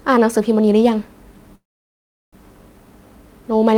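Speech clip with a call audio freeze from 1.55 to 2.35 s: the last sound trails off briefly, then about 0.73 s of silence, and the speech resumes where it stopped with nothing lost but running 771 ms later, likely from delayed packets emptying the jitter buffer.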